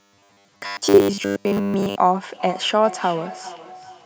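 A short speech recording carries two separate faults. From 0.01 to 1.97 s the speech has robotic sound from repeated short buffers: a rigid, metallic buzz at 100 Hz sits on the voice, which still loosely tracks the speech. The likely cause is audio arriving too slowly, so playback keeps repeating a stretch of about 10 ms and skips the real signal for most of this span. A spectrogram would show evenly spaced horizontal harmonics at multiples of 100 Hz, and the waveform would show near-identical cycles repeating every 10 ms. From 2.32 s to the end there is a feedback echo between two devices. Each stretch of speech returns roughly 400 ms later, thinner and more ringing, with the loudest repeat about 15 dB below the direct speech, as one device replays what a nearby microphone picked up. On a spectrogram each speech burst would have fainter copies trailing it at that fixed spacing, and the waveform would show matching smaller bursts offset by the same interval.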